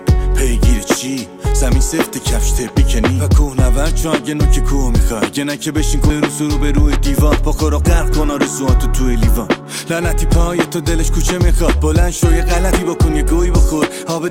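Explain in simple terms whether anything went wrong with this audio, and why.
Dropped buffer (overrun) at 2.69, 6.10 and 12.72 s: a jump where the sound skips ahead, likely because the program collected samples too late and a short chunk was overwritten.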